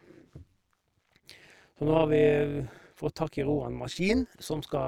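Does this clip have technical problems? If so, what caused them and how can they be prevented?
Yes. Throughout the speech a metallic buzz with extra tones sits on every sound, the level pulsing by about 11 dB at around 200 times a second. This is overlap-add ripple: windowed frames were recombined with an overlap whose gains don't sum evenly, so loudness dips once per frame. Preventing it means choosing a window and hop size that satisfy the constant-overlap-add condition, or normalising by the summed window.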